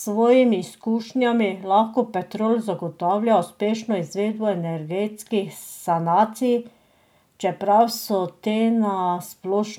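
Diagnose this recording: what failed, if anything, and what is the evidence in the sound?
Nothing in this speech recording points to a failure at any stage of the chain. No event in the sound calls for a diagnosis.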